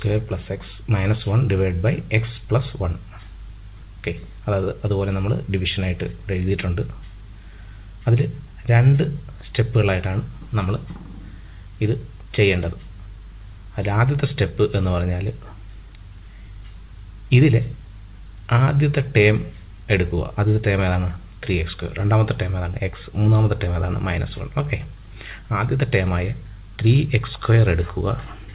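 From the start of the clip to the end, the audio carries clock drift between sender and receiver. The sending side's clock runs fast, by around four percent, so samples arrive slightly quicker than the receiver plays them out. The jitter buffer keeps gaining material it has no room for, and the receiver has to shed it continually. None of this is heard as a single event. It shows up as a steady, low-level unevenness in timing for the whole duration.

Repeated timing corrections run from 0.08 s to 28.5 s as the receiver trims short pieces to keep pace with a sender playing at 104 percent of its rate. Every edit goes the same way, removing rather than repeating, but the cuts are spaced irregularly. Each one is brief, so the result is faint hiccups and a slightly unsteady tempo rather than obvious gaps. This all passes through a narrowband call codec, G.711 mu-law, with nothing above 4 kHz.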